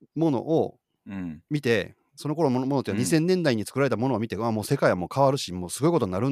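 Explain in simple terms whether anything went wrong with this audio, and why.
Nothing went wrong here; the speech comes through as it should.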